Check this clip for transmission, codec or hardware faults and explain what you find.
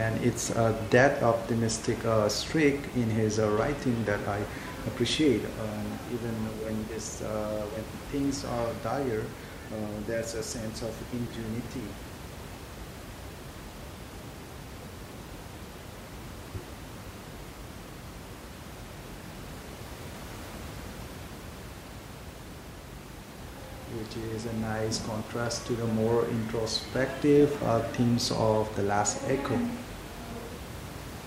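No transmission, codec or hardware faults can be heard; the only background sound is the room noise picked up by the microphone, sitting about 13 dB below the speech.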